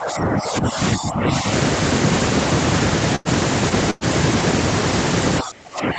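From 0.00 to 1.46 s the speech dips and thins in patches adding up to about a second, falling by roughly 10 dB at worst. This is likely speech suppressed in double talk: the echo canceller, unable to separate this talker from loudspeaker echo, turned everything down.

At 3.15 to 3.28 s a sound is held too long, with a faint buzz or dip, for about 97 ms. This is a short stall from a late packet. The jitter buffer emptied, the receiver stretched the last sound, and playback resumed where it left off, 97 ms later.

From 3.90 to 4.04 s the sound is again drawn out into a brief, fading buzz or hiss lasting 105 ms, without dropping to silence. This call audio freeze most likely comes from held-up packets draining the jitter buffer. The audio then continues from the same point, so a gap is inserted but nothing is lost.

From 5.42 s to the end the speech is pushed down hard, by roughly 25 dB at its deepest. 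This is likely the same double-talk suppression, with the canceller again turning this side down while the far end is active.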